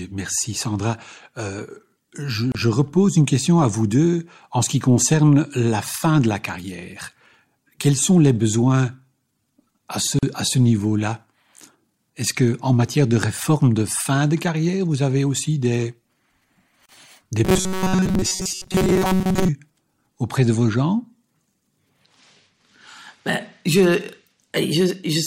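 At 2.52 s, just before "repose une question à", a gap at a join of encoded pieces cuts the speech for about 29 ms, with more at 10.19 s (40 ms) and 16.86 s (33 ms). Separately encoded segments were joined with their encoder delay and end padding left in, so brief, slightly smeared silences open and the speech resumes where it stopped.

From 17.45 to 19.50 s the speech turns into a rigid metallic buzz at 188 Hz, robotic sound from repeated short buffers. This is likely caused by starved playback repeating a roughly 5 ms chunk while most of the real audio, around 70 percent, is skipped.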